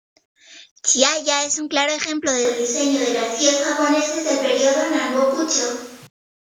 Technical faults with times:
2.45-6.07 switch to a distant microphone

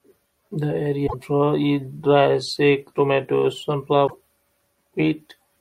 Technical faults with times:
1.03-1.14 damaged data in a compressed stream
4.04-4.15 damaged data in a compressed stream

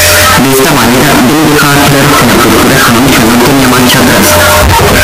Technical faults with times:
0.00-5.03 signed and unsigned mixed up

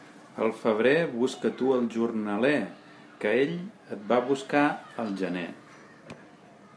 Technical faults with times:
none

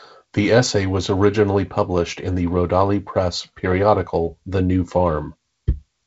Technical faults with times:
none

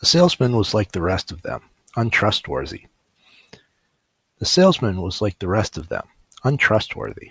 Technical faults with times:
5.60-7.30 resampler restarted on every block

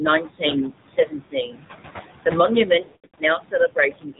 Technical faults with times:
0.00-4.20 noise suppressor artifacts
0.00-4.20 AMR narrowband mobile codec
0.64-1.64 speech cut by the noise suppressor
1.24-1.32 lost AMR speech frames
2.66-4.20 speech cut by the noise suppressor
2.82-3.20 lost AMR speech frames

